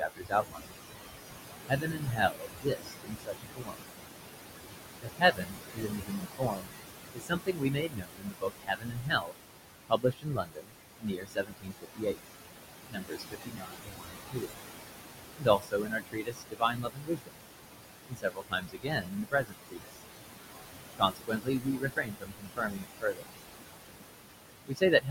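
Noise suppressor artifacts run through the whole clip. The room noise sits only about 6 dB below the speech, and the suppressor pulls it down by about 20 dB in each band it judges to be steady noise, frame by frame. The background sinks between phrases and swells back under them. On a spectrogram, the noise floor shows as a blotchy, flickering patchwork of isolated time-frequency cells instead of an even haze. The gaps between phrases fall almost to silence in the waveform.

Speech cut by the noise suppressor happens in five stretches: 0.0 to 0.71 s, 1.67 to 3.86 s, 5.01 to 20.03 s, 20.98 to 23.28 s, and 24.67 s to the end at 25.1 s. Because the voice is barely louder than the room, the suppressor mistakes some of it for noise. Soft consonants and word endings drop by about 19 to 22 dB and sound swallowed. Within each stretch, roughly half a second, two seconds, ten seconds, a second and a half, and a fifth of a second are affected. 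The waveform shows syllable tails collapsing abruptly rather than decaying.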